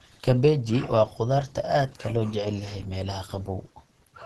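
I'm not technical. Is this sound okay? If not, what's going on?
No. For the whole clip the speech sounds muffled and hoarse, with a rough, grainy edge, and there is nothing above about 12.1 kHz, so the top end is cut off. This is likely Opus compression squeezing the recording hard. At that squeeze the encoder uses its hybrid speech mode, which saves space by rebuilding detail from a simplified description of the sound, leaving the damage plainly audible.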